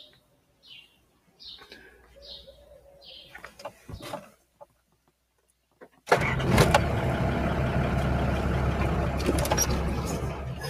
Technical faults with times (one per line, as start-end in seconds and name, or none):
0.00-10.70 noise suppressor applied to music or sounds
0.06-2.17 sound cut by the noise suppressor
2.48-3.89 sound cut by the noise suppressor
4.26-6.08 sound cut by the noise suppressor
10.35-10.68 sound cut by the noise suppressor